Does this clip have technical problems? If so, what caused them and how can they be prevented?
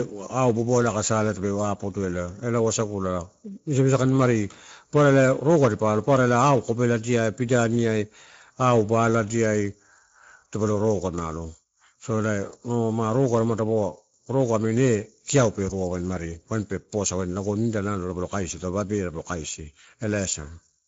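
Yes. Throughout, the Speex codec ran at a low setting, pointing to roughly 17 kbps. Its excitation gets too few bits, so the speech sounds plainly hoarse and noisy, with nothing above 7.6 kHz. Use a higher Speex quality setting or a modern codec such as Opus to prevent it.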